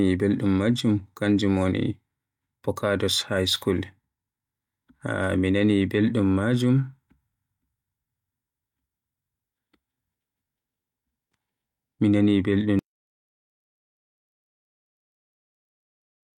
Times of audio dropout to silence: 12.79-16.37

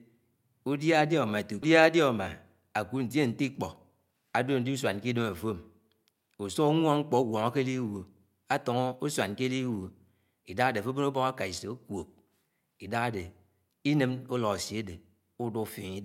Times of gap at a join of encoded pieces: none

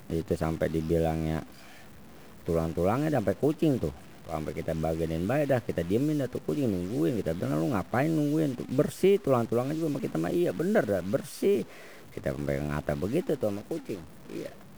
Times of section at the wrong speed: none

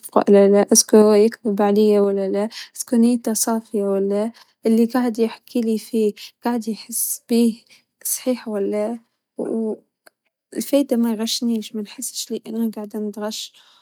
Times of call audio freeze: none

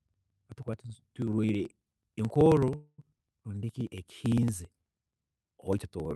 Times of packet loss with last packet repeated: none

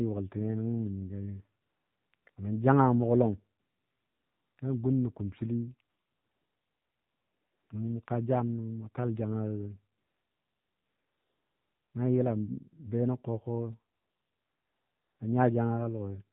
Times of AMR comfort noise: 1.62-2.36, 3.60-4.58, 5.90-7.70, 8.06-8.08, 9.98-11.94, 13.94-15.20

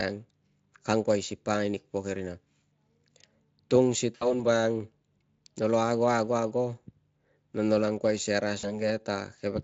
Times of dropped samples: none

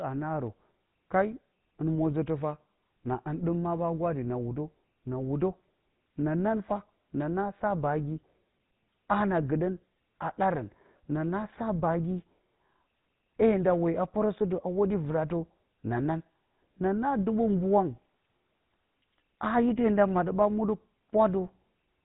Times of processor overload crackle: none

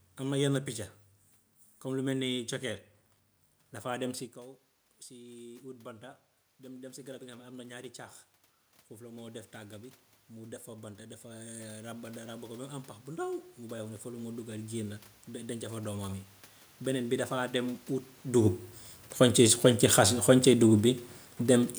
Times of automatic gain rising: 5.10-7.92, 8.99-12.09, 13.05-16.30

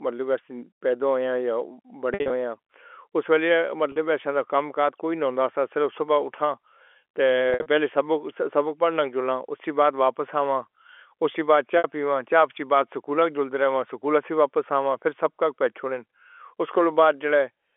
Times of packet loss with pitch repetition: 2.14-2.30, 3.92-3.96, 7.50-7.66, 11.78-11.84

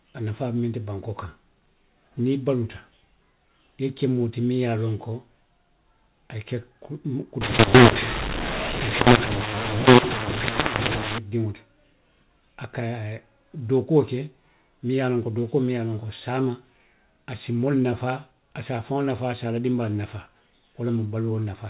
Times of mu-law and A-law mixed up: 7.41-11.18

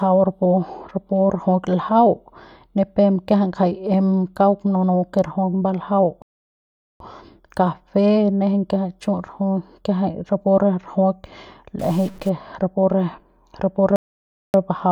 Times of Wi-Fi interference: none

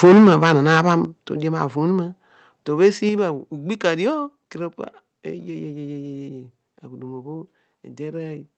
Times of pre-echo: none

